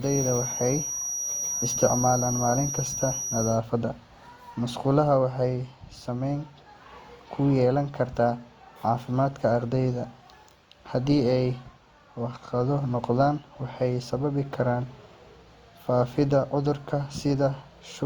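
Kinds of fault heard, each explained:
Feedback whistle: a 5.8 kHz tone, swelling and fading slowly, sits just under the speech. It is likely a near-feedback loop, and it keeps ringing instead of building into a howl.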